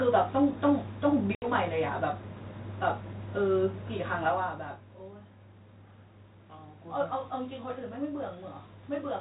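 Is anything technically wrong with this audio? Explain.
Yes. Between 1.35 and 1.49 s there is packet loss on an ADPCM call. About 70 ms of audio drops out and is replaced by silence, with hard edges. A handful of packets, around seven, went missing. The decoder's adaptive predictor and step size lost track of the sender's. So when the speech resumes, it comes back with some distortion. It settles within tens of milliseconds, back into the light grain of the 32 kbit/s G.726 coding.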